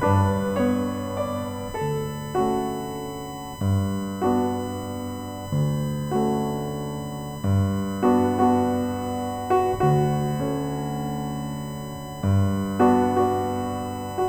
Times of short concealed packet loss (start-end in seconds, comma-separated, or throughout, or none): none